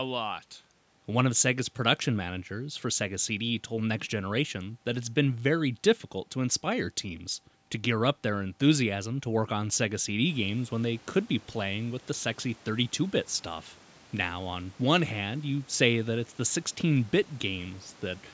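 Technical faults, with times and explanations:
No technical faults are audible in this recording.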